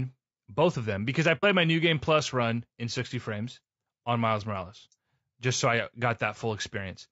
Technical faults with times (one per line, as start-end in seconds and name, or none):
0.00-7.12 low-delay AAC compression
1.37-1.44 AAC frame loss with muting